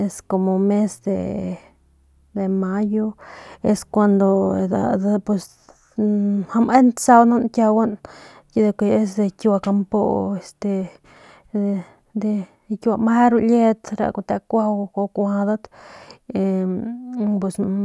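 Nothing in this speech recording stands out as a technical fault anywhere along the way, so there's nothing to flag here.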